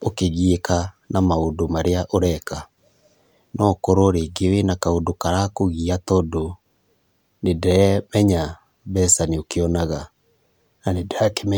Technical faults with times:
none

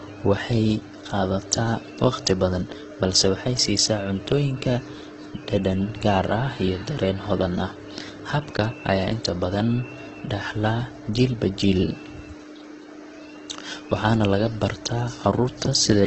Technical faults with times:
0.00-16.07 Opus compression

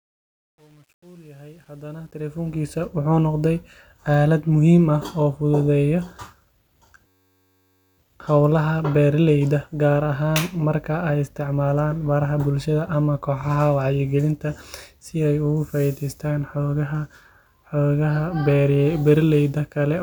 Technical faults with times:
0.00-2.85 truncation distortion on a fade
7.07-7.98 system hang loop

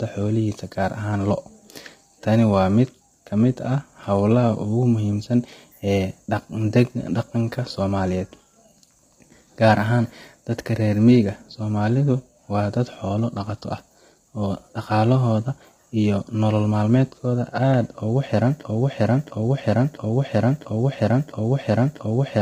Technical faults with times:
0.00-22.42 low-delay AAC compression
18.63-22.42 broken-record loop

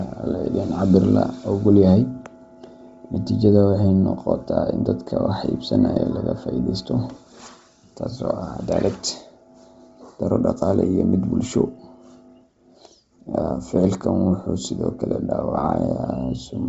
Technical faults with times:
0.00-16.69 Bluetooth LC3 compression

